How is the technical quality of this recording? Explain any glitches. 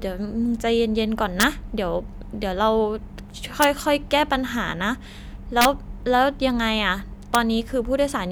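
Four violent cracks break up the speech, at 1.40–1.43 s, 3.62 s, 5.61–5.65 s and 7.35 s. These are integer overflow: loud peaks pushed about 0 to 3 dB past the integer limit wrap around to the opposite sign instead of clipping. Each peak snaps across the full range, which makes the cracks far harsher than ordinary clipping.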